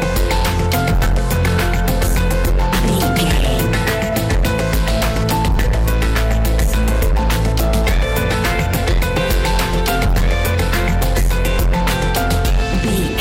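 Driven about 11 dB past what a stage could pass, nearly a third of the samples are cut flat: hard clipping throughout, heard as harsh fuzz on every loud sound.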